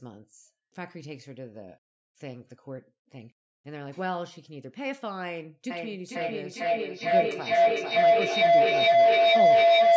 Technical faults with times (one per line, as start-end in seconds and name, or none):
5.70-9.96 feedback howl